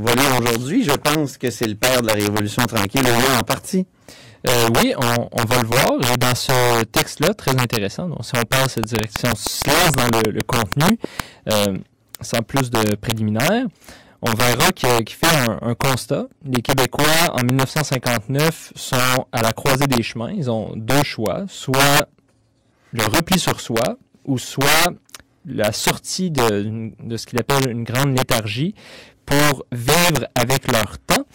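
Speech, with integer overflow running through the whole clip. The gain drives the signal about 9 dB past the largest value the integer format can hold. Those peaks are not limited. They wrap round to the opposite sign and jump across the full range. Only a small share of samples go over, around 2 percent. But each one lands as a violent crack on the loudest syllables, far harsher than clipping. A train of clicks runs from 8.83 to 11.21 s, between "donc si on passe" and "euh sans plus de". It ticks at a steady 6.35 per second, about fifteen clicks in all. They share much the same shape and stand roughly 15 dB above the speech. They sound through the pauses as well as under the speech. The likely cause is interference from nearby equipment or a faulty connection or power supply.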